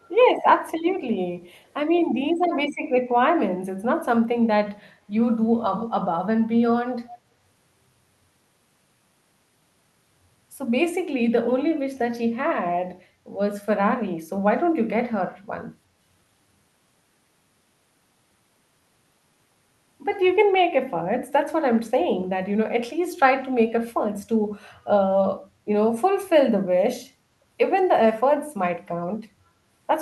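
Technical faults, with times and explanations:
0.02–0.08 s, 5.77–6.03 s and 7.08–7.18 s, echo leak: a delayed copy of the speech trails it by about 0.31 s, very faint at first, strongest near 5.8 s, fainter at 7.1 s. A far-end echo canceller likely let loudspeaker pickup through. The spectrogram shows a weaker duplicate of the harmonic pattern shifted right, and the waveform shows matching low ghost bursts.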